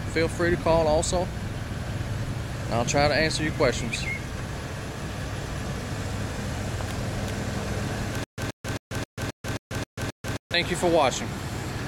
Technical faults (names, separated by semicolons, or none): stutter with silent gaps